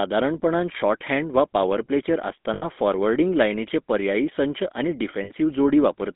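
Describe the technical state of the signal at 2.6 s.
At 2.6 s the signal sits inside a run of lost GSM frames, from 2.54 to 2.65 s, just after "शॉर्टहॅंड वा पावर प्लेचेर" and before "फॉरवर्डिंग लायनीचे पर्यायी संच". The decoder repeats the last good frame's parameters, producing a rough, metallic held ring. The length fits about four lost 20 ms frames.

Underneath is the GSM full-rate codec, heard throughout. Speech is synthesised from a vocal-tract model driven by regularly spaced pulses, which gives a plainly audible buzzy, gravelly roughness. The band runs from about 200 Hz to 3.6 kHz, consistent with 13 kbps full-rate coding.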